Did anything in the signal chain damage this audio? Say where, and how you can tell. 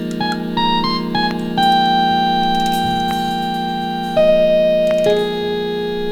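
No, the signal chain shows no audible damage at any stage.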